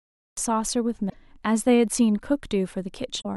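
The audio opens with a cut-off start. The first 0.37 s are digital silence, and the speech enters abruptly at 0.37 s already mid-sound, with no natural attack or fade. The capture or stream evidently began after the talker had started.

Damaged data in a compressed stream follows at 1.06–1.14 s and again at 3.18–3.26 s, each about 80 ms long. Corrupted bytes in the encoded stream cause the decoder to misread frames and lose sync until it finds a valid header, producing a brief chirp or blip each time.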